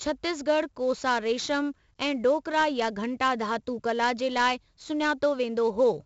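From start to finish the speech carries 4-bit ADPCM compression, with heavy damage. Each sample is coded as a coarse 4-bit step from a prediction, so a gritty hiss rides on every loud syllable and sharp onsets smear where the step size lags. Nothing reaches above 7.7 kHz, which fits a 64 kbps stream at a low sample rate. Unlike fixed low-bit-depth noise, this grit rises and falls with the speech level.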